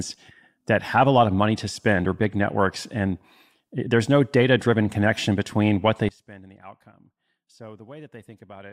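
At 6.09 s, right after "connection between what they", the speech falls by about 23 dB and stays sunken to the end of the clip. The likely cause is one channel inverted: with one stereo side's polarity reversed, the centred speech cancels when both sides are summed, leaving only their small difference. Unlike a dropout, what survives is not silence but a faint copy of the sound.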